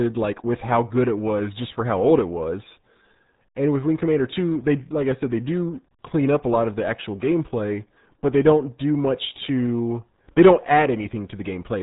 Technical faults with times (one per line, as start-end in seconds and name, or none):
0.00-11.83 RealAudio 14.4 codec